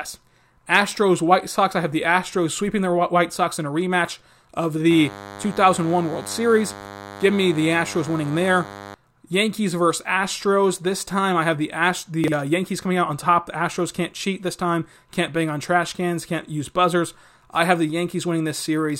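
From 4.90 to 8.95 s, a DECT cordless phone buzz sits under the speech. A nearby DECT handset or base station is sending short radio bursts 100 times a second. The audio circuit rectifies them into sound. The result is a thin, steady buzz at 100 Hz, rich in harmonics. It stays well below the speech, roughly 15 dB down.

At 12.24 s, chunks arrive out of order. A 40 ms chunk came one chunk late. It plays after the chunk that should follow it. No audio is missing. The order is simply wrong across 12.24 to 12.32 s. The swap leaves three hard joins. Between them the speech sounds briefly jumbled and garbled.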